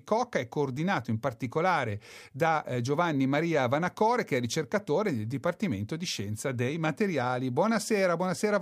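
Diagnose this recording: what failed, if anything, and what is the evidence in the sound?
No stage in the chain, from the analogue wiring and converter through buffering, processing, coding, transport, storage and playback, shows any sign of failure in this speech recording.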